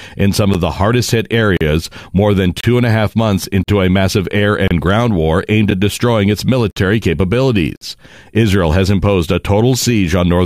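Gaps between stream segments hit the speech about once a second, at 0.54, 1.57, 2.61, 3.63, 4.68, 5.71, 6.71 and 7.76 s. Each is a hard-edged hole of 8 to 52 ms of silence where mistimed segment boundaries leave nothing to play, but nothing is lost.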